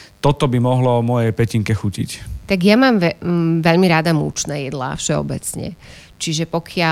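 Mains buzz runs through the whole of this speech clip, a steady, raspy buzz sitting about 40 dB below the speech. Sharp switching spikes from a dimmer, rectifier or unshielded cable enter twice per 50 Hz cycle, spreading harmonics of 50 Hz up into the kilohertz range.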